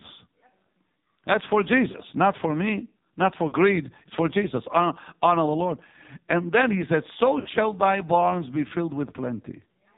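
Throughout, the speech carries heavy AMR narrowband mobile codec damage: nothing passes above 4 kHz, and the voice is buzzy and synthetic, which points to one of the lowest AMR-NB rates, around 6 kbps, with few excitation pulses to model each frame.

Lost AMR speech frames occur three times. At 1.92 s, just before "not for me not", a 20 ms loss (one frame) gives a brief dip or warble. At 3.48 s, just after "not for me not", about 40 ms is lost, which fits two frames. At 7.40 s, just before "thy barns be filled", about 60 ms is lost, which fits three frames. In each case the decoder repeats the last good pitch and vocal tract settings at falling gain, so the sound smears and dips before recovering weak or rough for a moment.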